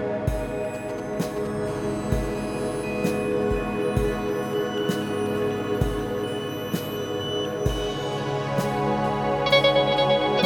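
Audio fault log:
0.75–1.47 s, GSM signalling bursts: a nearby 2G phone is handshaking with the network and firing off short clumps of radio bursts. The audio circuitry rectifies them into a galloping dit-dit-dit of brief 217 Hz buzzes, sitting roughly 15 dB under the sound.
1.68–3.10 s, GSM phone buzz: now the phone's in a call and transmitting steadily at 216.7 bursts per second. The rectified pulses come through as a hard, raspy 217 Hz buzz full of harmonics, unrelated to the sound, at about 16 dB below it.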